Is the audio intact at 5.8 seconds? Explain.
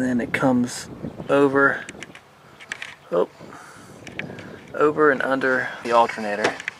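No. A brief glitch from 5.81 to 5.85 s comes from damaged data in the compressed stream: corrupted frames made the decoder misread them and lose sync.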